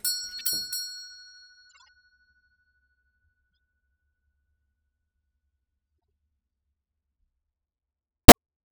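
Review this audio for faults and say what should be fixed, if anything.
Three short bursts of corrupt frame decoded are audible: 0.39 to 0.47 s, 1.69 to 1.89 s, and 8.28 to 8.32 s. Each is a chirp or noise blip where flipped bits in compressed frames led the decoder to apply wrong gains and misread spectral codes, placing energy at unrelated frequencies. The first is fairly loud. The second is faint but longer, pointing to several consecutive damaged frames. The last is the loudest, about 15 dB above the first, and is the most objectionable. Adding checksums with frame concealment, so damaged frames are muted or interpolated instead of decoded, would prevent this.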